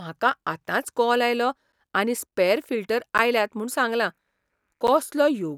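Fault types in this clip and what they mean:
Block of digital silence: the speech drops abruptly to silence and returns with no fade. Here the gaps are very short: a 1.25 ms tick at 0.33 s before "आतांच कॉल आयलो आनी", then ticks or dips of roughly 10 to 12 ms at 1.72, 3.18 and 4.87 s. Unlike a fade-out or masked packet loss, nothing fills these gaps, and the hard edges are what make them audible.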